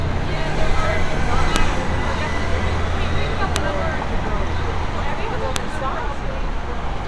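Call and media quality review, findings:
File header played as audio: sharp, loud click at 1.56 s, 3.56 s and 5.56 s, repeating every 2.0 s regardless of the surrounding audio. Probable component: stream concatenation or chunk assembly, where each 2-second WAV piece keeps its header and those bytes are decoded as samples. Waveform: brief sharp spike at each boundary. Spectrogram: thin vertical broadband line from low frequencies to the top of the band, aligned to the chunk seams.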